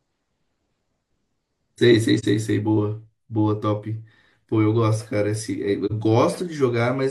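In this speech clip, the sound dips briefly and comes back at 2.19 to 2.25 s and again at 5.85 to 5.91 s. These soft-edged gaps are AAC frame loss with muting: each fits one lost frame of about 43 ms, zeroed by the decoder and smoothed by overlapping windows.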